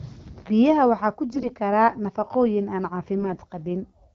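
Speech clip with AMR bit errors in two bursts: 1.32 to 1.51 s, right after "waxaa ku", and 3.18 to 3.38 s, after "kara nafaqooyin aan". Pitch and loudness carry on, but the sound turns hoarse, scratchy and gargly because flipped bits in the weakly protected frame data misplace the excitation pulses and skew the fine gain and spectral values. Unlike packet loss, nothing drops out or gets smoothed over. The first burst has the higher error rate, roughly 7 percent against about 3.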